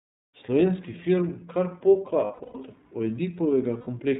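Narrowband speech with a plainly audible roughness and a slightly synthetic edge throughout, after a smooth fade-in near 0.35 s: nothing above 4 kHz survives. This is the iLBC codec, coding each frame's excitation independently, and the sound fits its 13.33 kbps mode with 30 ms frames. At 2.24 to 2.55 s the sound turns into a held, buzzy vowel-like drone in broken stretches, the longest about a tenth of a second, and again from 3.78 to 3.88 s for about 90 ms. These are lost iLBC frames: the decoder repeats the last pitch cycle mixed with noise. Because each frame stands alone, clear speech returns immediately afterwards.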